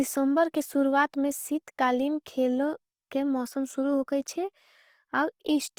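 Opus compression runs through the whole clip. The voice sounds rough and grainy rather than swirly, with plainly audible damage even though content reaches 20.2 kHz. The likely cause is Opus in its music mode, where starved bands are refilled with folded or noise-like energy, fitting roughly 24 kbps.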